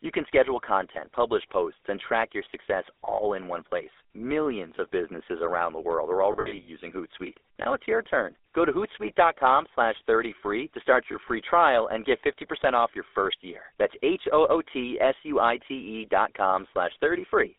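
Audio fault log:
throughout: GSM full-rate codec. The band runs only from about 300 Hz to 3.6 kHz. The codec rebuilds the voice from a vocal-tract model driven by sparse, evenly spaced pulses. This gives a plainly audible buzzy, gravelly roughness, which fits a 13 kbps full-rate stream.
6.32–6.7 s and 11.12–11.16 s: lost GSM frames. After "world are", about 240 ms goes missing, scattered over 360 ms in runs of up to roughly 70 ms. After "free to start", a single 20 ms frame drops. The decoder repeats the last good frame, so the sound briefly holds as a rough, metallic ring.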